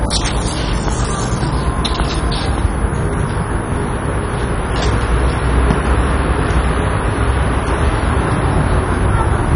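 A switching power supply somewhere in the chain is producing an audible whistle, and it sits over the whole recording from start to finish. It comes through as a thin, high tone wandering between about 10.17 and 10.37 kHz, roughly 25 dB below the programme.

Also present for the entire length is damage that points to MP2 compression, likely Layer II coding at a starved bitrate around 32 kbps. With so few bits to share, the coder has shut off its upper sub-bands entirely, so nothing survives above about 10.5 kHz and the sound is noticeably dull. The bands that remain are coarsely quantised and flicker in and out, giving a gurgling, granular roughness throughout.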